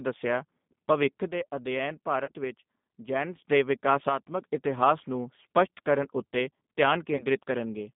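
The whole recording carries the sound of the G.729 codec, which here sounds like the G.729A variant at 8 kbit/s. The speech is rebuilt from a vocal tract filter, a pitch predictor and a few pulses per frame. It is not the original waveform. The band runs only from about 150 Hz to 3.7 kHz. Nothing bright survives above that. The damage is plainly audible. Voices sound rough and synthetic.

At 2.25 to 2.32 s there is VoIP packet loss concealed by the speech codec. About 30 ms of audio went missing, which fits a single lost packet. The decoder filled the gap by repeating its last pitch and filter and lowering the gain. The sound smears into a brief buzzy tone or coloured noise that fades. It stays weak for a moment after real audio returns. The same happens at 7.16 to 7.26 s, again with about 30 ms lost.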